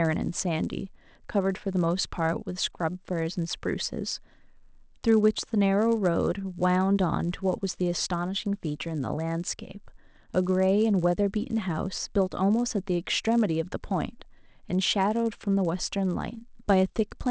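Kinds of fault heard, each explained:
Resampler restarted on every block, throughout: each 10 ms block is converted on its own, so the converter lacks the neighbouring samples at every edge. The small edge errors repeat at 100 Hz, heard as a buzz riding on the speech and absent in pauses.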